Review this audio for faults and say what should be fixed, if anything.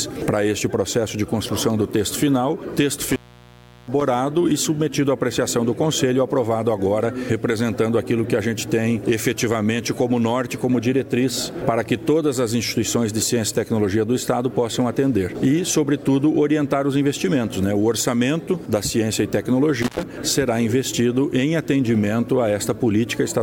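Intermittent contact occurs twice. From 3.03 to 4.01 s the signal drops out for about 720 ms. A second dropout runs from 19.82 to 20.03 s, open for about 106 ms. Each is a loose plug or cable losing connection for a moment. The sound stops abruptly, with crackle where the contact breaks and remakes. Faint hiss remains while the line is open. Fix it by reseating or replacing the connector and securing the cable against movement.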